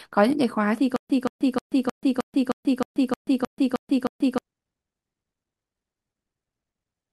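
From 0.96 to 4.38 s comes stutter with silent gaps. A 176 ms fragment repeats eleven times between 134 ms silences. Playback likely stalled.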